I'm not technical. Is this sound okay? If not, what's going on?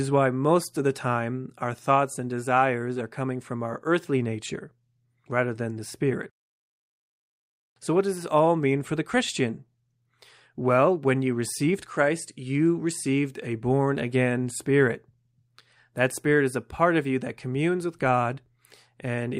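Yes, nothing here sounds wrong.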